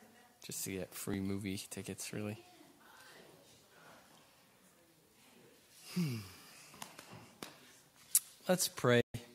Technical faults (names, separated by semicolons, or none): audio missing between chunks; digital broadcast dropout